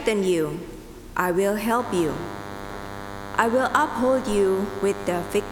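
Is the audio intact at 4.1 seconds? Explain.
No. At 4.1 seconds the audio carries DECT cordless phone buzz, present from 1.79 s to the end of the clip. A nearby DECT handset or base transmits a radio burst every 10 ms, and the audio circuitry rectifies it into a thin, steady 100 Hz buzz rich in harmonics, roughly 10 dB below the signal.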